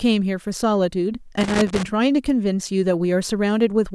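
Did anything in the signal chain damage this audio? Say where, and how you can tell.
Yes: loose connector crackle in the analogue wiring, 1.41 to 1.85 s. An irregular scratchy burst shows a worn contact intermittently breaking, chopping the speech signal.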